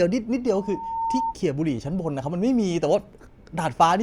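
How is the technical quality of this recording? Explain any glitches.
The recording has one clear fault. From 0.52 to 1.35 s there is loudspeaker feedback squeal. A microphone is hearing its own loudspeaker, and the loop runs away at 913 Hz. The tone swells over about half a second until it is roughly as loud as the speech.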